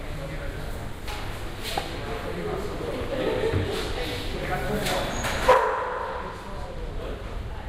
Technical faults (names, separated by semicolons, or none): crude rate conversion